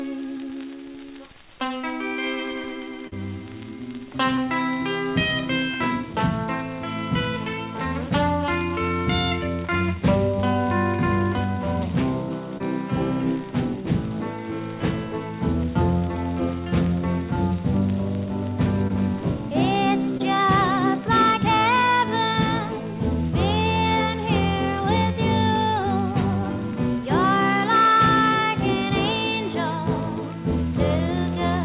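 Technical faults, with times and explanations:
0.92–0.96, 1.82–1.85, 3.07–3.14, 4.36–4.40, 12.58–12.62, 18.88–18.92, 20.18–20.22 s: short concealed packet loss. Gaps of about 20 ms, and 40 ms at 3.07 s, were bridged by extending the preceding sound before blending back. Each is heard as a brief smear or wobble over the 4 kHz-limited call audio.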